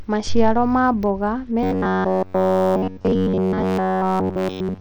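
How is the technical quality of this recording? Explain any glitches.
The technical quality is poor: the speech carries compression damage from start to finish, and from 1.63 s to the end it collapses into a mechanical buzz.

Throughout, the treble thins out and flickers, with a gritty grain and aliasing riding on the voice. That fits Bluetooth SBC compression, likely at around 80 kbps. SBC splits the sound into a few wide bands and starves the weak upper ones of bits when the bit pool is small, so the top end drops in and out. Unlike the swirly, watery artefacts of a perceptual codec such as MP3, this damage is coarse and gritty.

From 1.63 s onward, the voice turns into a rigid, metallic buzz fixed at about 94 Hz. It still loosely tracks the speech rhythm. This is robotic sound from repeated short buffers, likely caused by audio arriving too seldom, so the player loops the last short chunk and skips the real signal. 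Essentially all of that stretch is repeated material, and the buzz rate points to a buffer of roughly 10.7 ms. It differs from ordinary dropouts because nothing goes silent, and from a vocoder-like effect because the buzz rate is set by the loop length.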